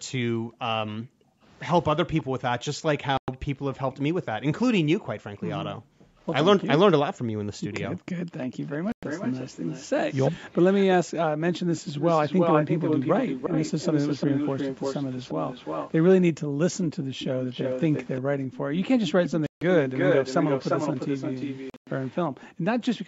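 From 0.0 to 8.59 s the room sound is background gated by the echo canceller. While the far end plays on the loudspeaker, the canceller pulls the microphone down hard, by as much as about 40 dB, so the ambience dips or vanishes, around two seconds in total, and comes back each time the canceller releases. Inside that span, from 2.17 to 3.96 s, a faint echo leak appears: a copy of the sound trailing by 348 ms, roughly 25 dB under the main signal. This is likely residual loudspeaker pickup that the echo canceller failed to remove and sent back.

At 3.17 to 3.28 s comes a hole of 107 ms, likely a Bluetooth dropout. Audio packets missed their deadline to the headphones and were discarded, which fits about five lost packets. The output goes silent and resumes further on, as if playback had continued through the gap.

From 8.41 to 22.98 s the echo leak returns far stronger, again delayed 348 ms but only about 5 dB below the speech, so a clear second copy comes back. 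A second 107 ms dropout, likely of the same kind, cuts out at 8.92 to 9.03 s. At 10.31 to 10.44 s the talker dips by around 20 dB for roughly 150 ms, likely speech suppressed in double talk: with both sides active, the canceller could not separate near speech from echo and attenuated both.

From 16.44 to 18.72 s the background is gated again, by up to about 40 dB and for roughly 400 ms in total. Two longer dropouts follow. The first, from 19.46 to 19.62 s, removes 149 ms in one piece. The second, from 21.70 to 21.87 s, also loses 149 ms, but as scattered gaps over 171 ms with a longest run of 107 ms. Each fits about seven lost packets. From 22.3 s to the end, gating recurs for roughly 300 ms at up to about 40 dB. The call microphone processing leaves nothing above 8 kHz.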